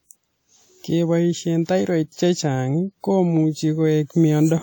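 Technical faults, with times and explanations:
Throughout: WMA compression, likely the cause of a ringing, washy quality where quantisation noise smears across tens of milliseconds and hiss breathes with the speech, which fits a bitrate around 48 kbps. A spectrogram shows blurred, blocky time-frequency patches with weak harmonics dropping out into gaps.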